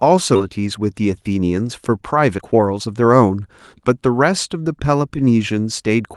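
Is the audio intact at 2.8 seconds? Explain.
No. At 2.8 seconds the speech is in the middle of a jitter buffer speed-up running from 2.17 to 3.37 s. The receiver's buffer had built up more audio than its target, so it shortened playback by cutting out brief segments one or a few pitch periods long, over and over, about a fifth of a second in total. Across that stretch the speech plays at roughly 119% speed with its pitch unchanged, so it sounds hurried.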